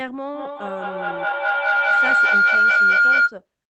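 From 0.34 to 3.41 s, a feedback howl builds. A microphone-loudspeaker loop gains level each pass, ringing near 1.5 kHz, pulsing roughly five times a second, peaking about 14 dB above speech.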